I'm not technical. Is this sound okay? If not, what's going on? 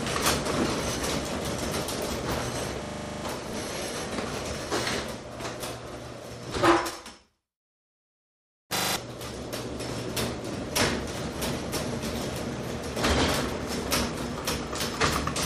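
No. At 2.84 to 3.24 s, and again at 8.76 to 8.96 s, the sound hits a system hang loop: the computer briefly froze, and the audio hardware kept replaying the same 40 ms snippet, 25 times a second. Unlike a plain dropout, which goes silent, this fills the gap with the repeated snippet, and roughly 0.4 s and 0.2 s of real sound are missing.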